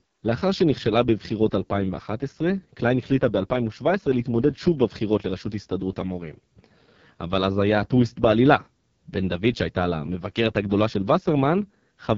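Speech heavily damaged throughout by the AMR wideband (HD Voice) codec: rough, raspy texture with nothing above 7.5 kHz, which fits its lowest 6.6 kbit/s mode.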